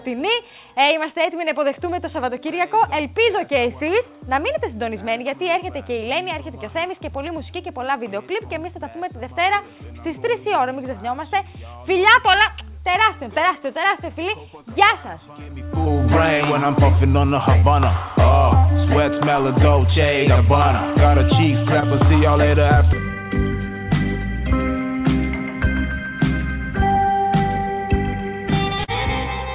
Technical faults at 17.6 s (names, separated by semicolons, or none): short concealed packet loss